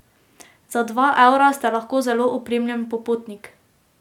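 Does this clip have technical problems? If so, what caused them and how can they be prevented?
No, there's nothing here that calls for a cause or a fix.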